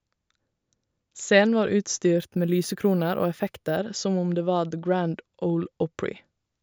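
From about 2.18 s to 3.77 s there's imaging from sample-and-hold upsampling. It sounds like each sample was simply repeated to raise the rate, which fits a jump from 16 kHz to 48 kHz with no smoothing filter. The speech spectrum gets mirrored, the first copy landing between 8 kHz and 16 kHz at about 23 dB down, so you hear a bright metallic fizz riding on the voice and moving opposite to its pitch.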